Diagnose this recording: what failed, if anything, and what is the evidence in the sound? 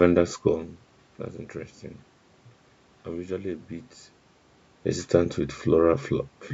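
Nothing stood out on listening to this speech recording that would point to a failure at any stage of the chain.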